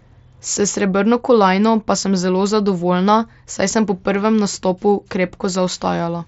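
Speech recorded over a Bluetooth mSBC headset link, band-limited to about 8 kHz by that wideband path, with no faults to report.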